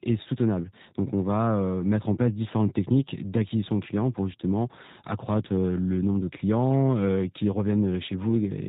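From start to finish the speech has passed through a G.729 codec, and the plainly audible damage fits the low-complexity G.729A variant at 8 kbit/s. Rather than sending the waveform, the encoder sends a vocal tract filter, a pitch predictor and a sparse set of pulses for every 10 ms frame, and the decoder rebuilds the speech from those. Everything above 4 kHz is gone, so the speech sounds narrow and muffled, with a rough, slightly synthetic buzz.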